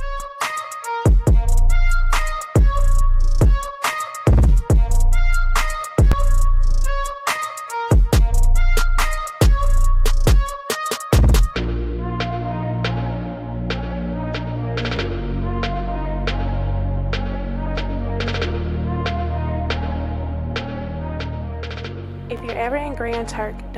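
Bluetooth stutter occurs three times, each caused by wireless packets arriving lost or late. The receiver fills each gap by replaying its last buffer, then jumps ahead as though the sound had kept playing. At 6.12 s and 14.97 s, about 14.5 ms is lost, heard as a brief repeated tick in the audio. From 22.37 to 22.40 s, a 29 ms gap, which fits two consecutive packets dropping, produces a twice as long double stutter before the sound resumes.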